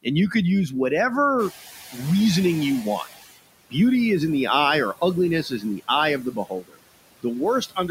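A speech recording carries noise suppressor artifacts throughout: the suppressor pulls steady background down by about 17 dB frame by frame, and a spectrogram shows noise bands dropping out between phrases and speckled, patchy energy under the speech. When the room noise jumps by about 12 dB at around 1.5 s, the noise suppressor is caught catching up. From 1.38 to 3.11 s the louder noise comes through with only about 13 dB of reduction, then sinks over 1.73 s as the estimate adapts, which appears as a bright band fading gradually on the spectrogram. Speech is also cut by the noise suppressor three times, with parts of it treated as noise. At 5.43–5.89 s, after "in the eye or" and before "eye of", a short stretch dips by about 8 dB. At 6.23–6.8 s, after "eye of", nearly half a second falls by about 22 dB. At 7.61–7.9 s a brief span drops by about 18 dB. On the waveform these are sudden notches in the envelope, and the affected sound comes across as swallowed or faint.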